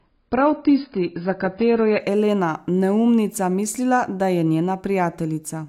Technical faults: adaptive stream starting at a low bitrate

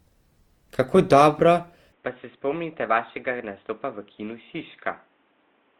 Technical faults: generation loss; input switched to a poorer device

